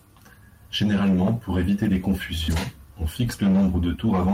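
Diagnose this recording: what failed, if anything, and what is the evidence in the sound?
Network stage: short concealed packet loss at 2.43 to 2.50 s. The receiver filled about 45 ms by extending the preceding sound, which leaves a brief smear.

Network and codec: lost packet rebuilt from error correction at 2.48 to 2.54 s and 3.50 to 3.56 s. Each 40 ms stretch is rougher, played from low-bitrate redundant copies.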